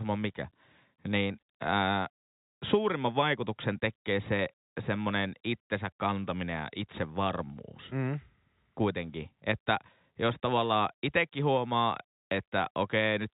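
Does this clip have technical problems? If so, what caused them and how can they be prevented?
No, the speech comes through an ordinary G.711 telephone path at 64 kbps that is working as it should, with the narrow telephone bandwidth and only faint coding effects expected of that format.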